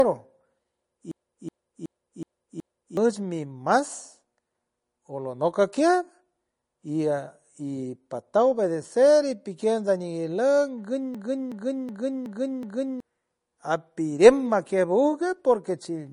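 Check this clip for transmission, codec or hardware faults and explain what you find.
Two faults affect this speech clip: a repeated system hang loop and plainly audible codec damage throughout.

From 1.12 to 2.97 s and again from 11.15 to 13.00 s, a system hang loop occurs. The system froze while the sound hardware kept replaying its ring buffer, so a 0.37 s slice repeats five times, a stutter at about 2.7 per second, which fits a 16384-sample buffer. Each time, about two seconds of speech are lost.

Throughout, the most likely cause is MP3 compression at a low bitrate, around 40 kbps. Nothing is present above 10.5 kHz, and the audio sounds plainly watery and swirly.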